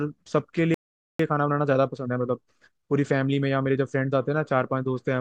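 A playback stall from 0.74 to 1.19 s silences the speech for about 450 ms, most likely because the player ran out of buffered data or its thread was blocked. Time-compressed catch-up follows from 1.19 to 4.19 s: the player trims its backlog by cutting and cross-fading short pieces, so the speech runs about 1.15 times fast at normal pitch.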